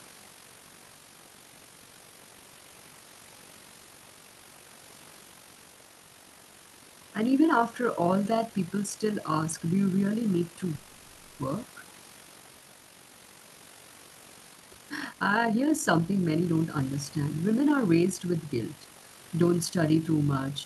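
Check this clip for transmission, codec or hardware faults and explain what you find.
Three faults are present in this speech recording, with a faint room noise about 26 dB below the speech as background.

Overlap-add ripple runs through the whole clip. The audio was split into windowed frames and rejoined with an overlap whose gains don't sum evenly, so the level swings by about 6 dB once per frame. At roughly 50 Hz this produces a fast, rough, robotic flutter over the speech.

A call audio freeze occurs from 10.75 to 11.41 s. For 640 ms the sound stops moving forward and the last fragment is stretched into a buzzy sustain that never reaches silence. This is likely a jitter buffer running dry while packets were delayed. The speech then resumes where it paused, adding a gap without losing anything.

Jitter buffer speed-up follows from 14.54 to 16.67 s. With surplus audio queued, the receiver repeatedly cuts out short pitch-period slices, roughly 0.7 s in total, to reduce delay. 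The speech plays at about 130% speed with unchanged pitch and sounds noticeably hurried.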